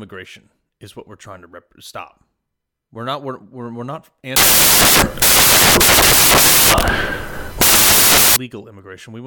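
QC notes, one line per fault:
4.36–8.36 s, samples built from the wrong bytes: after "we're we're we're not", loud, harsh broadband noise is heard, as misassembled bytes turn noisy low bits into each sample's dominant part.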